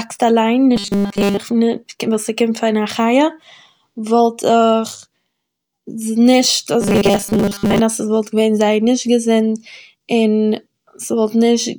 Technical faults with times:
0.76-1.37 robotic sound from repeated short buffers
6.81-7.79 robotic sound from repeated short buffers

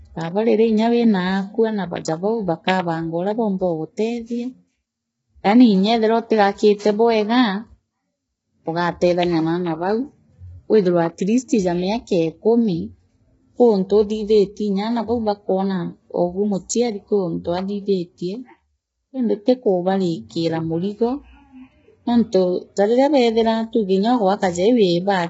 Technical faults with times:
0.00-25.30 low-delay AAC compression

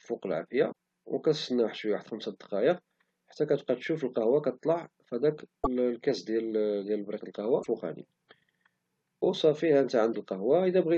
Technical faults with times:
0.71 broken MP3 bit reservoir
5.63-5.67 broken MP3 bit reservoir
7.62-7.67 broken MP3 bit reservoir
10.12-10.15 broken MP3 bit reservoir

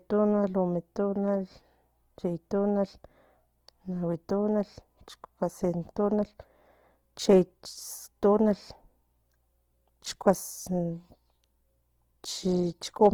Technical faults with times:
0.00-13.13 Opus compression

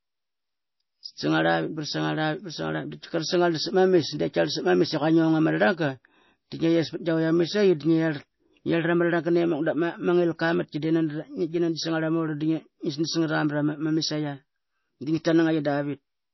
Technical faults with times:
0.00-16.33 MP3 compression

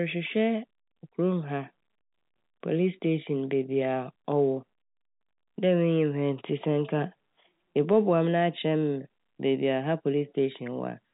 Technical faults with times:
none

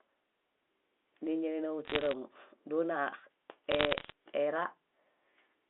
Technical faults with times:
1.85-2.13 bit errors on a digital phone line
3.71-4.12 bit errors on a digital phone line

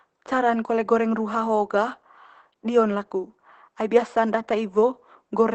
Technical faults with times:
0.00-5.54 Opus voice compression

